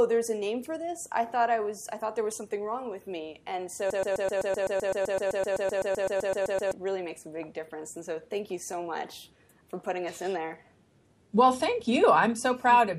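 From 3.90 to 6.73 s, a broken-record loop repeats one 128 ms fragment 22 times back to back, likely a stalled player or stream, so the intervening audio is lost.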